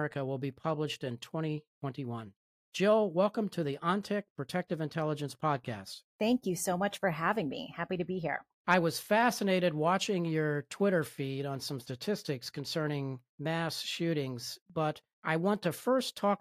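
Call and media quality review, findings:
No audible defects found in the speech signal; level, continuity and timing hold steady throughout, with nothing in the capture, processing or transport path to flag.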